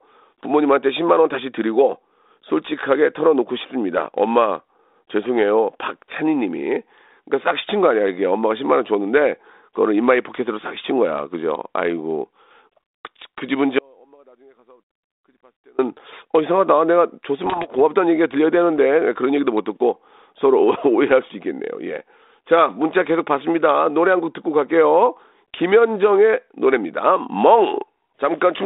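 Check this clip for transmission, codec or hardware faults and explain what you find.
Two faults stand out, both riding on a telephone-band path that sounds like G.726 ADPCM at around 32 kbit/s, with the usual 250 Hz to 3.7 kHz band and light codec grit.

From 13.79 to 15.79 s there's an audio dropout to a faint residue. The wanted signal drops out abruptly for about 2.0 s, leaving only a faint trace about 35 dB down. The likely cause is a broken link upstream while the path after it stayed live. It's a hard cut, not a pause or fade.

From 17.44 to 17.70 s there are bit errors on an ADPCM link, at roughly half a percent. Each flipped bit throws the decoder's step size and predictor off, so the damage rings on briefly. You hear rough pops and bursts with jumpy level changes.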